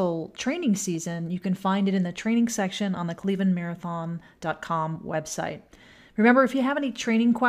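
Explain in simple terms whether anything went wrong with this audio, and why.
Nothing went wrong here; no faults can be heard.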